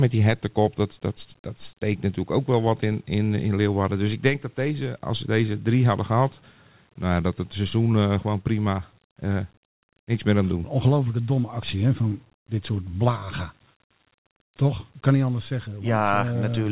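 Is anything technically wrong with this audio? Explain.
No, nothing's wrong here; it's speech carried over a G.711 mu-law call link at 64 kbps, so it stops at about 4 kHz and has the light coding grain that codec normally adds.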